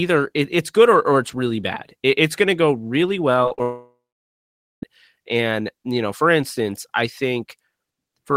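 From 3.43 to 3.60 s, just after "going to go really", repeated packet loss strikes: four short gaps, the longest about 38 ms, are patched by stretching the preceding sound, so around 40 percent of that span is concealment and the speech turns choppy and robotic.

From 3.62 to 4.83 s comes a long network dropout, likely from audio ceasing to arrive. About 1.2 s is lost; the receiver briefly extends the last sound as a fading buzz, then roughly 0.84 s of silence follows before speech resumes without the missing part.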